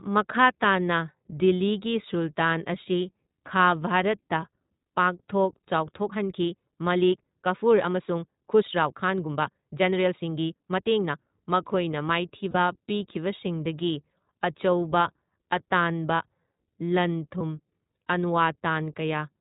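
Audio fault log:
throughout: iLBC codec. Sound is band-limited and slightly rough and synthetic, with nothing above 4 kHz. The codec rebuilds each short frame's excitation independently, and the plainly audible damage fits iLBC at 15.2 kbps with 20 ms frames.
6.05–11.27 s: time-stretched section. Pace turns abruptly faster, about 1.44 times normal, sounding rushed while pitch holds steady. Likely software squeezed this stretch to fit a length, dropping short pieces to preserve pitch.
12.51–12.56 s and 17.39–17.41 s: lost iLBC frames. Brief held, slightly buzzy vowel-like fill, about 40 ms then 20 ms, fitting two lost frames and then one. The decoder repeated the last pitch cycle with noise, and the sound recovers almost immediately.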